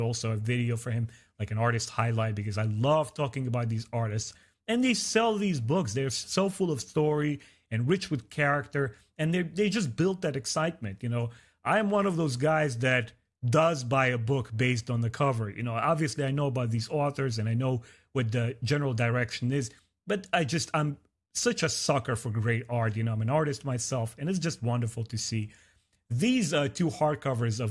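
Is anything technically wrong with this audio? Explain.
No, no technical faults heard.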